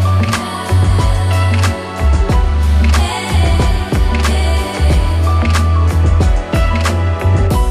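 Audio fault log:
No fault is heard anywhere in the audio.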